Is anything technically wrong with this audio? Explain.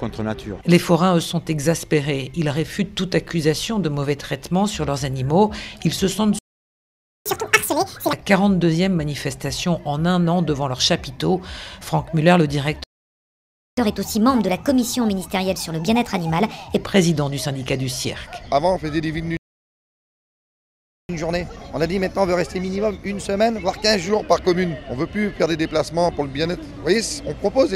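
Yes, the playback keeps stalling and then rushing to catch up. Playback stalls hit at 6.39 s, 12.84 s and 19.37 s, going silent for about 0.87 s, 0.94 s and 1.7 s. The sound just cuts out mid-flow, most likely because the player ran dry of data or its thread got blocked.

After each stall there's a catch-up at higher speed, where the backlog gets resampled faster. It runs from 7.26 to 8.13 s at 2x, nearly an octave up; 13.77 to 16.77 s at 1.25x, a few semitones sharp; and 21.09 to 24.09 s at 1.1x, about a semitone and a half up, before settling back.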